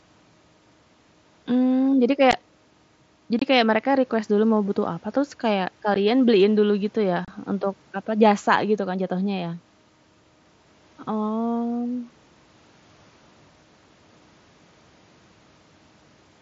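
Unconcealed Bluetooth headset packet loss punches short holes in the speech at 2.31 s, 3.39–3.42 s, 5.94 s and 7.25–7.28 s. These 15 to 30 ms gaps fit whole 7.5 ms mSBC frames dropping between headset and phone. Nothing patches them, so each gap has abrupt edges.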